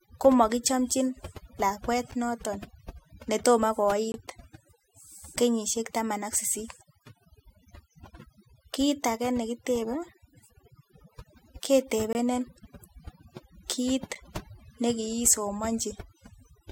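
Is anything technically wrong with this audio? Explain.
Yes, there are two problems. Throughout the speech the background drops and breaks up into twinkling specks. This is overdone noise removal: a noise reducer set too aggressively cuts individual frequency bands it judges close to the noise, taking quiet parts of the voice with them.

There are also short, hard-edged silent holes, each a gap between stream segments. The first comes at 2.12 s, right after "komokichomnjin lakwet". The others are at 4.12–4.14 s, 12.13–12.15 s and 14.15 s. They last about 8 to 22 ms and fall on a roughly 2-second rhythm. Segment timestamps leave a small gap that the player fills with silence, so nothing is lost, but the sound briefly cuts out.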